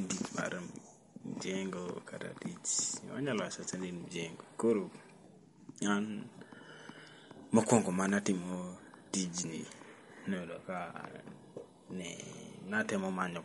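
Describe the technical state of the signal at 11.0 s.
MP3 compression is present at 11.0 s, as throughout the clip. A starved encoder, likely MP3 at around 48 kbps, removes everything above 11.2 kHz and lets weak frequency lines flicker between frames, leaving the speech watery and swirly, with metallic chirps on s sounds.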